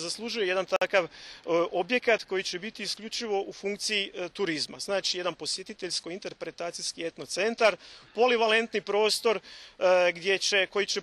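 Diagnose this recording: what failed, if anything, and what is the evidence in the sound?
Codec stage: a gap at a join of encoded pieces, 0.76 to 0.82 s, a roughly 52 ms gap where separately encoded segments were spliced untrimmed.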